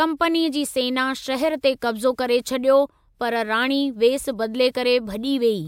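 No technical faults are audible.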